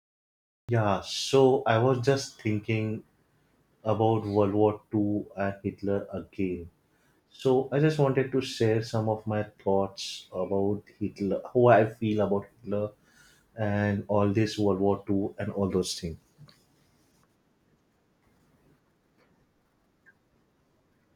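A speech recording with a cut-off start. The first 0.69 seconds are digital silence. At 0.69 s the speech begins abruptly, mid-sound, with no natural attack or fade-in. The recording or stream evidently started late, so the opening was lost.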